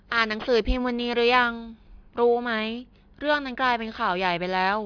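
Aliasing runs through the whole clip, from start to finish. The speech appears to have been resampled down to a rate near 11 kHz with no anti-alias filter first. Everything above the fold point at 5.5 kHz reflects back below it as unrelated, inharmonic tones sitting roughly 25 dB under the voice. Sibilants sound gritty and metallic, and the spectrum stays dense right up to that 5.5 kHz edge instead of tapering off.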